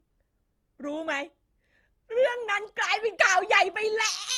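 Speech with generation loss throughout: swirly, hollow and smeared attacks beyond what one Opus-like pass near 48 kbit/s would cause, likely from about four re-encodes.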